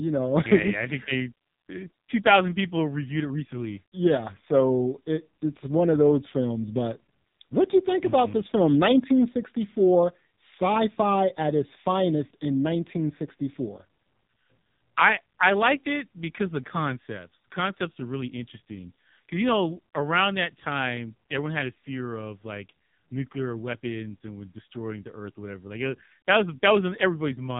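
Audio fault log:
Throughout: AMR narrowband mobile codec. Nothing passes above 3.8 kHz, and the heavily buzzy, synthetic speech suggests a sparse pulse-driven vocal-tract model at about 5.9 kbps.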